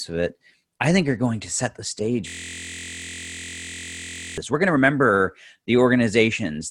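A system hang loop runs from 2.28 to 4.38 s, just after "to set the stage". The system froze while the sound hardware kept replaying one 23.22 ms slice of its ring buffer, which fits a 1024-sample buffer, producing a steady 43.1 Hz buzz.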